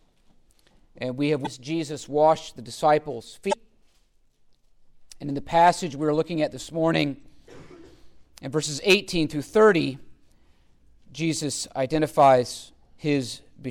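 Three short glitches come from damaged data in a compressed stream, at 1.43 to 1.47 s, 3.49 to 3.54 s and 7.20 to 7.23 s, each only a few tens of milliseconds. In each spot the bytes reaching the decoder were wrong, so it misread those frames, lost its place and had to hunt for the next good frame header before carrying on. You hear a quick glitch that cuts into the sound before it picks back up.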